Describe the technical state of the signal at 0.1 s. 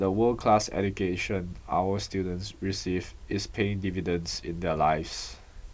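At 0.1 s the speech signal is intact, with no audible technical fault at that moment.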